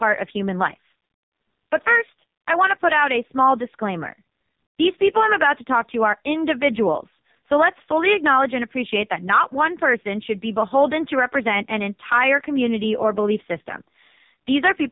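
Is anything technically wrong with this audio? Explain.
Yes, there are two faults, both running through the whole clip.

Gain pumping: the level of the speech swells and ducks by about 5 dB all the way through, with quieter stretches rising and then being pulled down as louder sounds arrive. The likely cause is a gain set too high feeding a fast limiter or compressor that clamps each loud moment. Unlike a slow automatic gain drift, the swings follow individual loud sounds and squeeze loud and soft parts closer together.

AMR narrowband mobile codec: the speech has passed through the AMR-NB mobile codec, and the damage is heavy. Nothing above 3.8 kHz survives, giving the narrow telephone band, and the voice sounds buzzy and synthetic, which points to one of its lowest bitrates, around 5 kbps. The codec rebuilds the voice from a vocal tract model and a few pulses per 5 ms rather than keeping the waveform. 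That buzz sets it apart from a plain low-pass filter, which only dulls the sound. The lowest bass is also missing, but that comes from the call's microphone high-pass filter and is not a fault.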